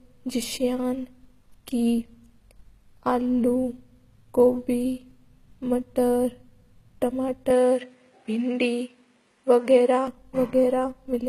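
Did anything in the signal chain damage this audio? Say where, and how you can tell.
Yes. The codec stage hurt it throughout. Nothing is left above 14.9 kHz, and the damage is plainly audible: the top end sounds rebuilt rather than captured. That's likely HE-AAC compression at a low bitrate, somewhere around 20 kbps, where spectral band replication copies lower bands upward.

There's also an input switched to a poorer device from 7.50 to 10.08 s. The band suddenly stops at 10.6 kHz and a new noise floor appears well below the speech, with no gap and no real level jump. That points to a likely capture-side swap to a narrower microphone or headset profile, then back.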